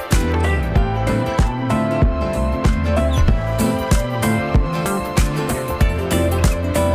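From 0.33 s to 3.13 s the sound turns dull and muffled, as if a blanket had been thrown over the top end, then regains its brightness. This is de-emphasis applied wrongly: a treble-cut curve meant to reverse pre-emphasis landed on audio that had none, or was applied twice. The response falls away smoothly with rising frequency, sitting about 11 dB lower at 10 kHz than at 1 kHz, which removes the upper-range clarity and air.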